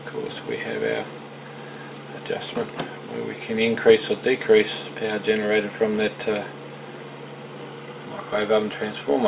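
Nothing here goes wrong; the audio just carries the narrow, phone-line character of a call path that stops at 4 kHz, which fits G.711 A-law at 64 kbps, and that's simply how the line sounds rather than anything breaking.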